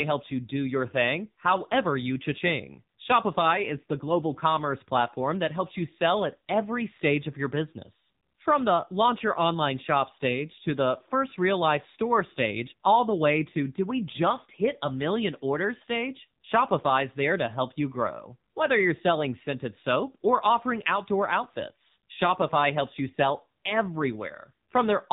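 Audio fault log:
Throughout: AMR narrowband mobile codec. Nothing above 3.8 kHz remains, and the speech turns buzzy and synthetic, since every 20 ms frame is rebuilt from a vocal-tract model and a few pulses, which fits about 7.4 kbps. A simple low-pass filter only muffles.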